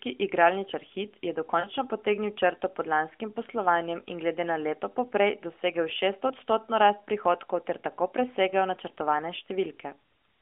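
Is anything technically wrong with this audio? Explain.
Yes. Lost AMR speech frames occur at 1.60–1.67 s, just before "potegnil črto pod lanskim," and at 6.28–6.34 s, between "na leto poprej dosegel" and "rast prihodkov ter tako." Failed radio frames made the decoder repeat its last settings with falling gain. The effect is a short smeared dip, seen as a fading envelope and blurred harmonics. The gaps fit two frames and one frame, over the mobile codec's 250 Hz–3.4 kHz band.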